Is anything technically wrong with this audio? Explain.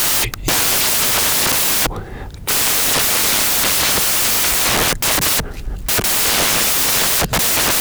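Yes. Throughout the speech, samples built from the wrong bytes: each sample's bytes are assembled in the wrong order or offset, so fast-changing low bits dominate. It sounds like loud, harsh noise close to white, often a pitched buzz on softer sounds. A spectrogram shows flat broadband wash; the waveform looks dense.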